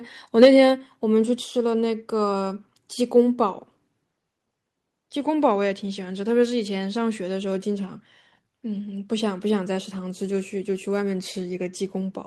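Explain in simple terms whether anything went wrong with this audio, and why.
Two problems can be heard, both right at the start of the recording.

From 0.42 to 0.47 s there is microphone overload: a loud syllable comes through with a harsh, crackly edge. The sound was louder than the recording could hold, so the tops of the loudest moments were sliced flat, likely because the microphone's input volume was set too high. Unlike a steady hiss or a dropout, the distortion is only on the loudest peak and goes away as soon as the sound gets quieter.

Then the microphone volume stepped down twice, at 0.45 s and again at 1.44 s. Each time the voice and the background become quieter together in one sudden step and stay at the new level. This was likely the call software spotting the overloaded microphone and turning its input down. A person moving away from the microphone would make the level fade gradually and the room sound change. 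Here the level drops instantly, and the first drop comes right on the distorted peak.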